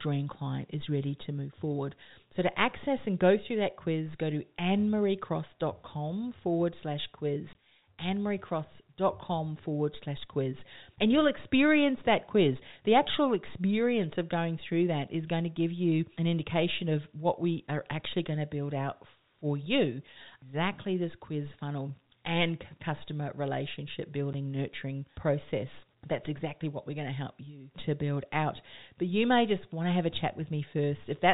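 Packets were dropped and the receiver played silence in their place (packet loss filled with silence). At 7.53 s, after "forward slash", a 20 ms hole opens, which fits two 10 ms packets. At 24.33 s, between "funnel and customer relationship" and "nurturing process", a 10 ms gap follows. Both holes cut in and out sharply, while the band-limited G.711 telephone sound continues around them.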